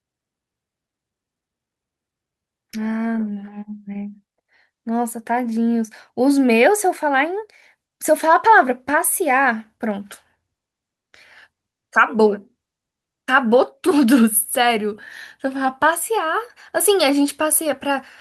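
No technical faults can be heard anywhere in the recording.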